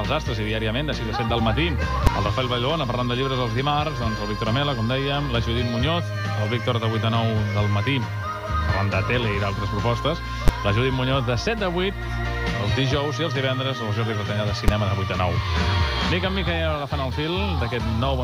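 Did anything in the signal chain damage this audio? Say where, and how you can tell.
Yes. Single bangs at 2.07 s, 10.48 s and 14.68 s are invalid numbers at full scale. A processing stage produced infinite or invalid values, which were pinned to maximum level for one block. Lengths of about 6, 12 and 6 ms fit 256- and 512-sample buffers.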